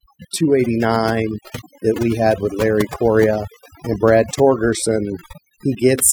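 Throughout, overdone noise removal strips individual frequency bands near the noise floor, leaving twinkling specks in near-silent gaps, unlike a noise gate's whole-signal muting.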